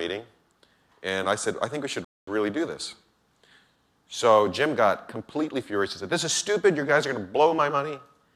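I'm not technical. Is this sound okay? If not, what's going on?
No. At 2.05 seconds the sound stops dead, then picks up again at 2.28 seconds exactly where it left off. That's a rebuffering stall. The player ran out of downloaded audio and waited for more. Nothing is missing, but about 0.23 seconds of silence is added.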